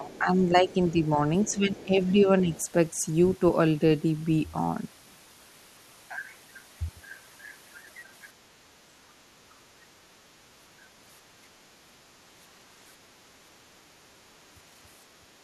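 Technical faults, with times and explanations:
0.0–1.19 s, 1.5–2.52 s, 9.35–9.39 s, 14.56–14.6 s and 15.15–15.28 s, speech suppressed in double talk: the speech dips in pieces, by around 10 dB in the early stretches, with brief dropouts later and a deeper cut of around 25 dB at 15.15 s. The likely cause is the echo canceller turning everything down because it could not separate the talker from loudspeaker echo while both sides spoke.
0.13–0.2 s, 1.44–1.85 s and 2.55–2.63 s, other side's voice leaking through: faint scraps of a second voice sit beneath the main speech, roughly 25 to 30 dB quieter. This is likely the far end playing through the device's loudspeaker, with the echo canceller failing to remove all of it from the microphone.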